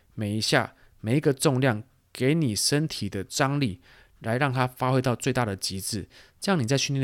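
No technical faults can be heard anywhere in it.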